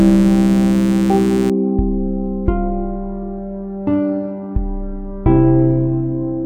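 From the start of the clip to 1.5 s, a mains buzz sits under the sound, roughly 10 dB below it: a steady, raspy drone rather than a smooth hum. It comes from sharp switching spikes, such as those from a dimmer, a rectifier or an unshielded cable, entering the signal twice per 60 Hz mains cycle. That spreads harmonics of 60 Hz up into the kilohertz range, giving the buzz its gritty edge before it stops at 1.5 s.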